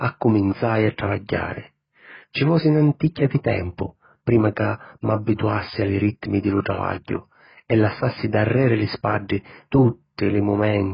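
From start to end, the speech sounds dull and warbly, likely from heavy AAC compression at a rate near 12 kbps. A spectrogram shows nothing above about 5.1 kHz.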